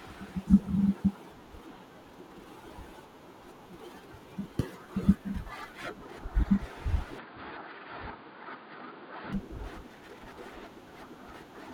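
At 7.19 s the speech abruptly turns dull and boxy, with nothing above 4.8 kHz, drops a few decibels in level, and picks up a faint new background noise sitting far below the speech. The change happens with no gap at all, and at 9.33 s the full bandwidth and level return just as suddenly. This is likely an input switched to a poorer device, such as a narrower-band microphone or a headset's call profile, and then switched back.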